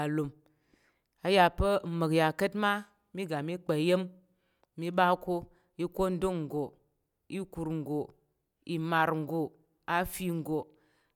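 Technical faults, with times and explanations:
There are no technical faults in this speech clip.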